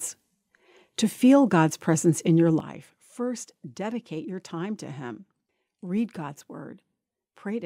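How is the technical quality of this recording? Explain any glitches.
A gain change hits the recording partway through. At 2.60 s there is a sudden gain jump, likely a digital gain setting applied in one step with no ramp. The speech and its background noise drop together by about 11 dB and stay lower until the end.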